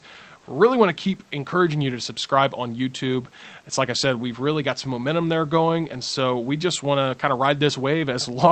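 Comfort noise in place of the background from 0.39 to 0.47 s, just before "want to keep encouraging": for 80 ms the room background turns into a flat, featureless hiss about 3 dB off its level, likely because discontinuous transmission paused sending during silence.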